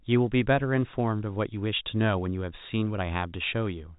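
Nothing stood out on listening to this speech, which comes through G.711 telephone coding with nothing above about 3.8 kHz.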